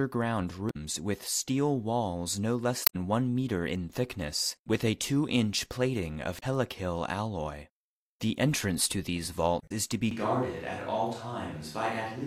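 Short glitches break the speech at 0.67–0.76 s, just before "with steel walls no", and again at 2.84–2.96 s, 6.36–6.43 s and 9.58–9.72 s, between "entrance to these" and "is to be". Each one is damaged data in a compressed stream: the decoder misreads corrupted frames, loses sync and skips ahead to the next valid header.

From 10.11 s, right after "is to be", to the end, the speech turns hollow and roomy, thinner in the bass, drops about 5 dB, and room noise rises to roughly 30 dB below the speech. This is likely a switch to a distant microphone after the close one dropped out.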